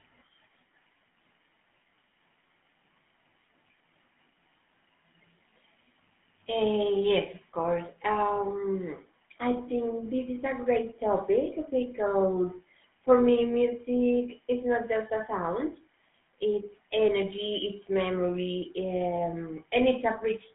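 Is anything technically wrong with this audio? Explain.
Yes. Throughout the clip, the speech has passed through the GSM full-rate codec, which fits a 13 kbps link. It rebuilds the voice from a vocal-tract model fed by regular pulses and keeps only about 150 Hz to 3.5 kHz, leaving the speech plainly buzzy, gravelly and muffled.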